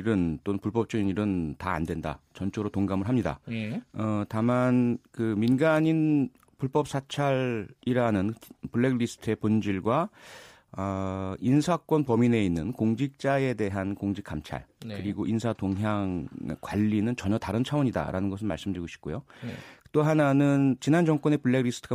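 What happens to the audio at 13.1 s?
Nothing goes wrong at 13.1 s; the speech plays through that moment intact, with no dropout, click or distortion.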